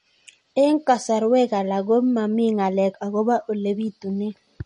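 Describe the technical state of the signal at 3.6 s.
At 3.6 s the speech carries MP3 compression damage, present across the whole clip rather than at that moment alone. The artefacts are plainly audible. Nothing sounds above about 10.5 kHz, so the treble is cut flat. The cause is likely a starved MP3 encoder, consistent with a low bitrate near 40 kbps. With too few bits, weak frequency lines drop in and out between frames. That gives a watery, swirly texture, with chirpy s sounds and smeared consonant attacks.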